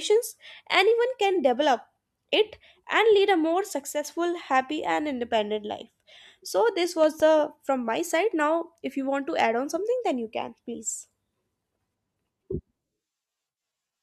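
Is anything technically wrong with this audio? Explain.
Yes, there are two faults. From 3.90 to 4.05 s, after "and lead a more", the speech abruptly drops about 6 dB, then recovers before "happy and independent life". It is likely one channel dropping out, which halves the mono sum.

From 7.04 to 7.23 s, just before "from my side", two sharp loud pops sit somewhat above the speech level, which continues underneath. They likely come from a voltage step or spike from a plug, switch or static.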